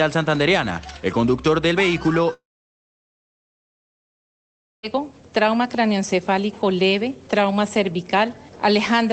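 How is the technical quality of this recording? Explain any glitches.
The recording has one significant glitch, a long network dropout, and the audio is band-limited to about 8 kHz, which fits a low-bitrate call codec. From 2.33 s to 4.85 s, about 2.5 s of audio is missing, likely because packets stopped arriving. The receiver briefly extends the last sound as a fading buzz, then leaves roughly 2.4 s of near silence before the audio resumes with that stretch lost.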